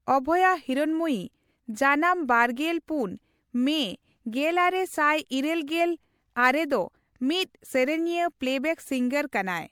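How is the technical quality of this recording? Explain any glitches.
The recording has a clear generation-loss problem running the whole way through the speech. The sound has a swirly, hollow texture, with smeared consonants and soft attacks, and the top end stops at about 19.9 kHz. It's likely been run through an MP3 encoder a handful of times, with the character pointing to something around 96 kbit/s. Each re-encode quantises on a shifted frame grid, so noise and spectral holes stack up beyond what one pass would leave.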